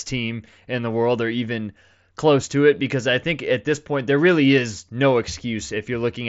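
Speech over a Bluetooth mSBC headset link, with content ending near 7.7 kHz as that wideband codec dictates; no technical faults to report.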